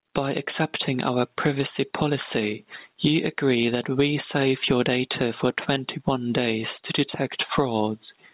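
Gain pumping runs throughout: the gain ducks about 15 dB under each loud sound, likely from excessive mic gain driving a fast limiter. The waveform shows flattened peaks. On a spectrogram the narrowband call path leaves nothing above 4 kHz.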